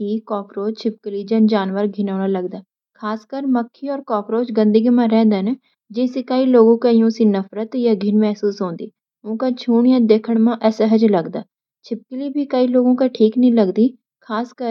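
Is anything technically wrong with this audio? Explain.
No, nothing technically wrong turns up here; it's just speech with no faults to point out.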